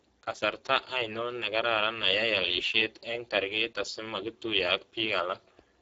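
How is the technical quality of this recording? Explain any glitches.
The speech sounds hoarse and noisy from start to finish, with nothing above 7.7 kHz. This is Speex codec damage: at a low setting near 10 kbps, CELP coding gets too few bits for the excitation.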